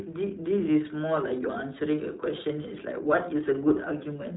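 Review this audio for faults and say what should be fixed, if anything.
Throughout, the speech sounds thin and boxed-in, with nothing above 3.9 kHz and a plainly audible rough, synthetic edge. This is the iLBC codec, which codes the excitation of each 20 ms frame independently, at a rate that fits its 15.2 kbps mode. To prevent it, carry the audio over a wideband codec such as Opus instead of iLBC.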